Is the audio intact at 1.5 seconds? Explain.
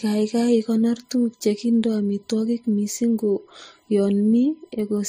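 No. At 1.5 s, as throughout, a USB whine sits at 1 kHz, about 45 dB below the speech, from bus frame current leaking into power or ground, a thin horizontal spectrogram line. The speech also shows transcoding between lossy codecs, likely MP3 then Vorbis, stacking their different artefacts together, with nothing above 15.4 kHz, a flat ceiling on the spectrogram.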